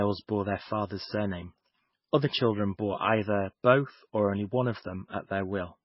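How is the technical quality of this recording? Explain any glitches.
The recording is heavily degraded by lossy compression for its whole length, likely MP3 compression at a very low bitrate. Nothing is present above 5.6 kHz, so the speech sounds dull and muffled. The encoder was short of bits, which fits a rate around 17 kbps. It dropped the treble band entirely and zeroed weaker frequency lines that flicker in and out between frames. This gives a watery, swirling texture, metallic chirps on s sounds, and smeared consonant onsets.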